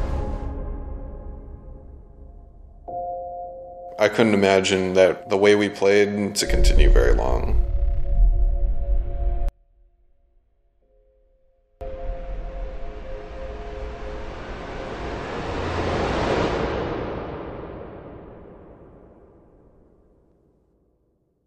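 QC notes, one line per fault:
9.49–11.81 s, one channel inverted: the sound falls by about 35 dB for 2.3 s but a low residue persists, unlike a dropout or mute. The likely cause is reversed polarity on one stereo channel, cancelling their shared content when summed to mono.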